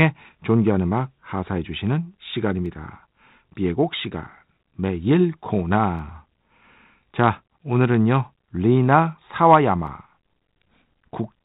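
Speech over a 32 kbit/s G.726 ADPCM path, limited to telephone bandwidth, has three sharp clicks at 2.66, 5.99 and 9.87 s. Each is likely dropped samples: a fraction of a millisecond of signal is missing, so the waveform jumps abruptly to a later value.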